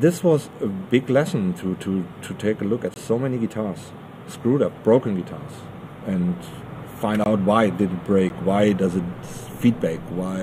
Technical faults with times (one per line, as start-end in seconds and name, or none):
2.94-2.96 block of digital silence
7.24 block of digital silence
8.29 block of digital silence